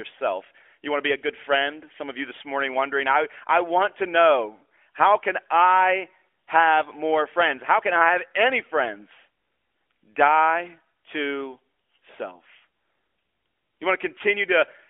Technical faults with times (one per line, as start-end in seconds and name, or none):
none